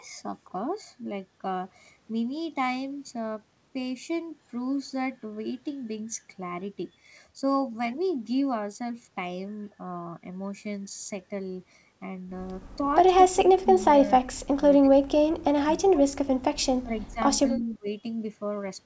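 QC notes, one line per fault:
13.32–17.19 s, speech suppressed in double talk: Across this stretch the talker keeps ducking in and out, with chunks pulled down by as much as roughly 30 dB and about two seconds lost in total. It sounds like the far end was talking at the same time and the echo canceller couldn't tell the near voice from loudspeaker echo. It likely clamped down on everything, so the voice drops out in pieces.
17.56–17.63 s, echo leak: There's a brief ghost of the voice here, arriving 291 ms late and sitting about 25 dB under the main speech. The far side is likely on a loudspeaker, and its canceller didn't strip everything its mic caught. That leftover scrap got sent back as a short, faint, delayed copy.
17.59–17.88 s, speech suppressed in double talk: Overlapping the end of that echo there's another dip, shallower this time at roughly 20 dB and lasting about 0.3 s. The mechanism is the same as before. 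Competing audio from both ends likely made the canceller duck the near talker along with the echo, so a short bit of the voice sinks and then comes back.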